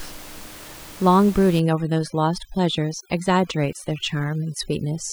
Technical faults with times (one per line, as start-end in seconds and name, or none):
1.59-5.13 overdone noise removal